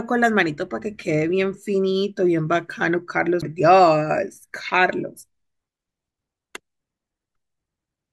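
A CD skip occurs at 3.42 s in this speech: the laser lost its track and landed on a different turn of the disc's spiral. Playback mutes for roughly 10 ms, heard as a small tick, then resumes abruptly from the new position, breaking the flow of the speech.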